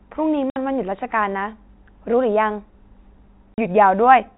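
Packet loss filled with silence chops the speech at 0.50–0.56 s and 3.54–3.58 s. The 60 ms and 40 ms holes fit whole 20 ms packets and show as flat waveform gaps and blank spectrogram columns, with hard edges.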